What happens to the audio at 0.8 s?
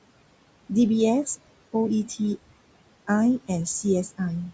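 At 0.8 s the noise suppressor artifacts are present, as they are across the whole clip. The suppressor estimates the steady room noise, which sits about 16 dB below the speech, and pulls down each frequency band it judges to be noise, frame by frame, by up to about 21 dB. The background therefore drops away in gaps and resurfaces under the speech, all within a band that stops at 8 kHz.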